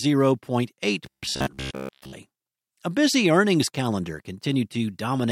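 Robotic sound from repeated short buffers runs from 1.06 to 2.13 s in this speech, where the voice collapses into a rigid, metallic buzz at about 67 Hz. The likely cause is audio arriving too seldom, so the playback side keeps looping the last chunk of roughly 15 ms, one cycle of that buzz, while the real signal in between is dropped. Most of the passage is made of these repeats, leaving the speech only loosely traced.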